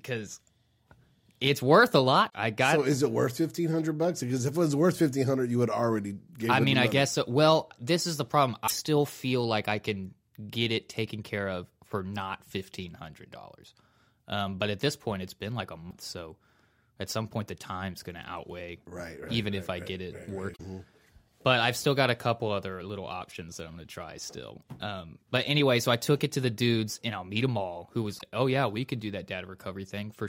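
Damaged data in a compressed stream breaks up the speech five times. The faults fall at 2.26 to 2.34 s, after "it's worth a" and before "I got", and at 8.64 to 8.72 s. Another comes at 15.87 to 15.93 s, after "it's been like a". The others fall at 20.52 to 20.60 s, after "if I get it", and at 28.15 to 28.22 s. Each lasts under a tenth of a second. Corrupted bytes throw the decoder off its frames. It loses sync and hunts for the next header. Each event is heard as a brief chirp, squawk, click or short hole.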